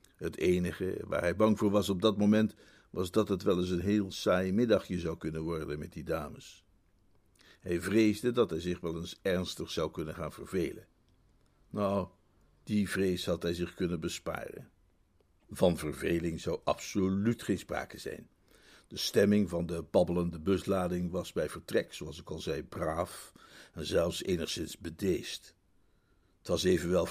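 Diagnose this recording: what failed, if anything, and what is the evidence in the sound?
Nothing here points to a failure at any stage of the chain; the recording holds together the whole way and there's no evidence to chase.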